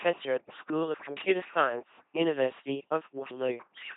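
From start to finish the speech passes through an LPC-10 vocoder at 2.4 kbit/s, heavily damaged. Each frame drives a ten-pole filter with either pulses or noise, giving a buzzing robotic voice. A spectrogram shows evenly spaced harmonic striations switching abruptly to noise, and nothing above 3.8 kHz.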